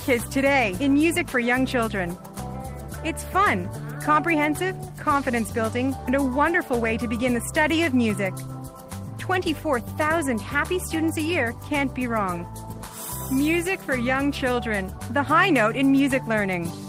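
There are no technical faults to describe at any point in this clip.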